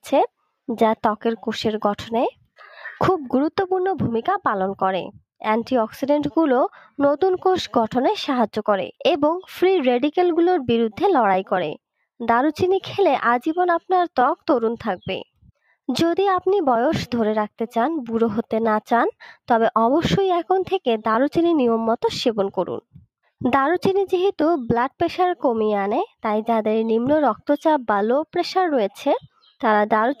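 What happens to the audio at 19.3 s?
Nothing goes wrong at 19.3 s; the audio runs on intact through that moment, with no dropout, click, distortion or other fault to be heard.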